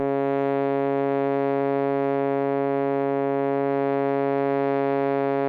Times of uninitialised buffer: none

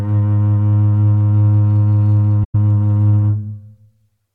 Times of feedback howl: none

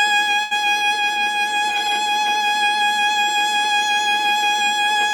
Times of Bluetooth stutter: none

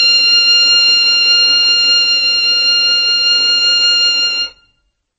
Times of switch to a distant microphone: none

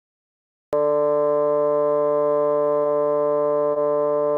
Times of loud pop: none

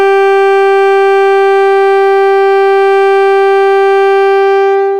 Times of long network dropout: none

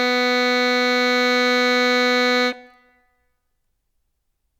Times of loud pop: none

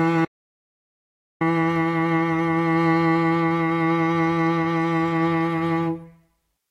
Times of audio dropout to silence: 0.25-1.41

